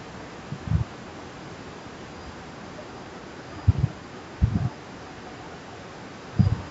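Nothing stood out on listening; the speech carries the expected traces of call microphone processing, with the lowest bass trimmed away and nothing above 8 kHz.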